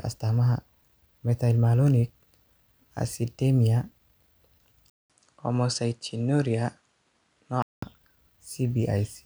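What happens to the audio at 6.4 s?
Input switched to a poorer device, from 4.90 to 7.82 s: after a 200 ms silence, the speech loses everything above 10.5 kHz, turns duller, drops a few decibels and gains a faint new noise floor, likely from recording moving to another, narrower-band microphone.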